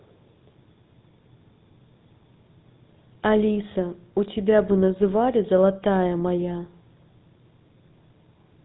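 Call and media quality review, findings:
GSM full-rate codec, throughout. Buzzy, gravelly roughness on all speech. Band ends near 3.9 kHz. Probable component: narrowband GSM leg, consistent with full rate at about 13 kbit/s. Mechanism: vocal-tract model excited by sparse regular pulses, one excitation sample kept in three. Codec damage plainly audible.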